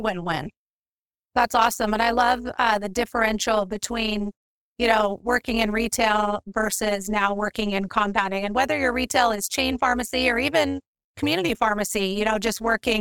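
Throughout the speech, overlap-add ripple: frames rejoined without constant-gain overlap, so level pulses about 11 dB at around 200 Hz, a metallic buzz with extra tones.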